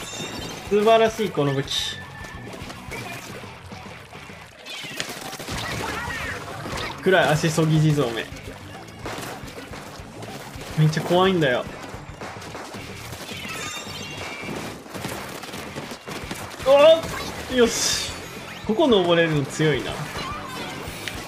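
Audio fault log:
Nothing here needs flagging; the audio carries on without a single glitch worth logging.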